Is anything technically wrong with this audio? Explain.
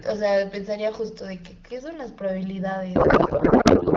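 Yes. From 2.95 s to the end of the clip, the speech gives way to garbled noise and warble that barely follows it. This is a codec payload misread: the decoder is parsing valid-looking frames with every field shifted, so its rebuilt parameters are nonsense. The pattern fits octet-aligned AMR packets being read as bandwidth-efficient ones. Before the break, the AMR wideband (HD Voice) codec sounds clear, consistent with 12.65 kbit/s.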